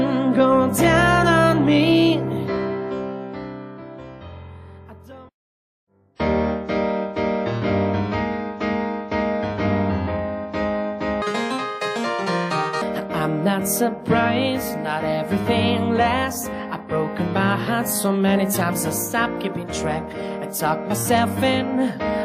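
From 11.22 to 12.82 s, audio read two samples at a time (double speed) makes the sound twice as fast and an octave higher.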